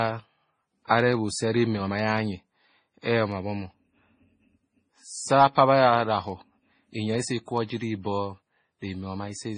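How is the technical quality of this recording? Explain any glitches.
The quality is poor throughout the clip. Transcoding between lossy codecs is the likely cause. The speech carries two layers of compression damage at once. Nothing is heard above 9.7 kHz. Smeared, swirly artefacts sit under a dull, band-limited top, which fits a low-rate MP3 re-encoded to AAC.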